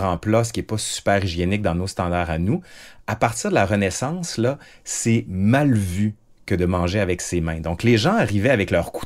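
A short recording of speech, with no technical fault to be heard anywhere in it. There is nothing here that calls for a time or a cause.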